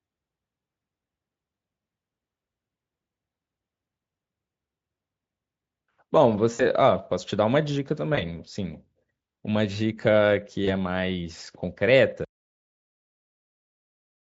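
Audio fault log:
6.53–6.62 s, 8.15–8.23 s, 10.65–10.68 s: VoIP packet loss concealed by the speech codec. A buzzy, fading smear as the decoder extrapolates over 60 ms, then 20 ms and 20 ms of lost audio.
12.25 s: cut-off end. The sound stops mid-stream into dead digital silence with no decay because the final buffers were never written.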